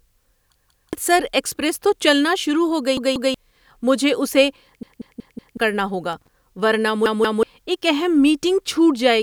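At 0.56–0.93 s, 2.97–3.34 s, 4.83–5.57 s and 7.06–7.43 s, a repeated buffer makes the speech stutter. A 186 ms chunk, which fits an 8192-sample buffer, replays two extra times (four at 4.83 s), dropping about 400 ms (700 ms). On a spectrogram, identical blocks tile with hard vertical seams.

At 6.13–6.28 s, loose connector crackle from a contact making and breaking gives an irregular scratchy burst. It shows as scattered broadband vertical streaks and jagged spikes on the waveform.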